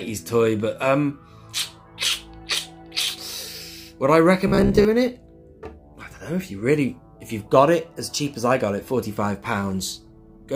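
From 4.47 to 4.85 s you get robotic sound from repeated short buffers: a stiff, metallic buzz at 66.7 Hz. Likely the audio was arriving late, so about half of that stretch is 15 ms chunks repeating while the real audio gets skipped.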